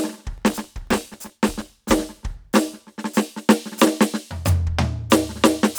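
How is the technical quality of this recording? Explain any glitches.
The recording has one clear fault, a processor overload crackle in this music from 0.38 s to 1.80 s. For that stretch the processor could not fill its audio buffers in time, and roughly a hundred deadlines were missed in quick succession. The buffers point to a size well under a millisecond. Each miss replays a scrap of old audio with hard edges, so the music sounds gritty and torn until the load eases. A spectrogram would show dense vertical broadband streaks across that span, and the waveform would show many small discontinuities.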